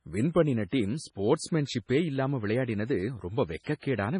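Throughout the speech, nothing passes above 10.5 kHz and weak detail swirls watery, likely MP3 compression at a low bitrate near 24 kbps, unlike a clean low-pass that wouldn't flicker. At 3.63 to 3.67 s and 3.79 to 3.83 s, pre-echo puts 40 ms and 35 ms of hiss before attacks; reverb would trail them instead.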